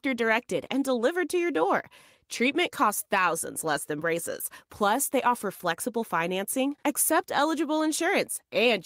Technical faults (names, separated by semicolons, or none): none